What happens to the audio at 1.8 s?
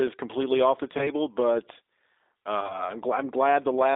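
At 1.8 s the speech carries G.729 codec damage, present across the whole clip rather than starting there. The codec rebuilds each 10 ms frame from a vocal-tract filter, a pitch predictor and a few coded pulses, so the speech comes out slightly rough and synthetic, which fits an 8 kbit/s G.729A link. A plain telephone band filter would only narrow the sound to about 0.3 to 3.7 kHz. This clip also has that buzzy, resynthesised texture inside the band.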